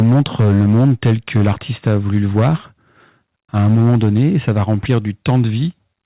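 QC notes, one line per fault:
0.0–1.52, 1.86–2.49, 3.56–4.19, 4.48–4.63, 4.9–4.98 and 5.28–5.41 s, microphone overload: peaks flattened by about 2 to 6 dB, likely from input gain set too high, giving harsh crackle on the loudest speech.
0.03 and 3.75 s, microphone volume stepped down: level drops abruptly by about 2 dB, then about 3 dB, likely the call software cutting input gain in response to the clipping.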